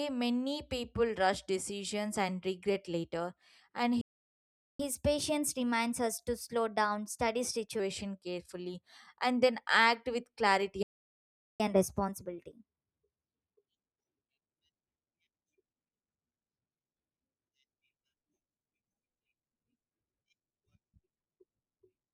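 The player likely ran out of data or had its output thread blocked, so a playback stall silences the speech from 4.01 to 4.80 s, just after "and regret later and", and again from 10.83 to 11.60 s. Each gap lasts about 0.78 s.

After each stall the player recovers with catch-up at higher speed, resampling its backlog at 1.1 times normal speed. The speech runs fast and sits about one and a half semitones sharp, then returns to normal. The first stretch runs from 4.80 to 7.80 s and ends before "carefully and then act". The second runs from 11.60 to 14.60 s, just after "then act with clarity".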